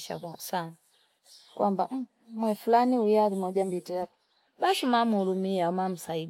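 No technical faults can be heard anywhere in the speech recording; the signal stays continuous and steady in level throughout.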